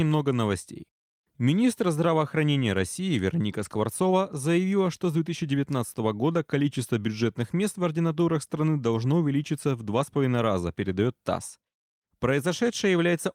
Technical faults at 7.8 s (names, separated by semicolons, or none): none